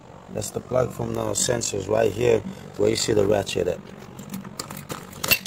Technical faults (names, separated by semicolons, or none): overlap-add ripple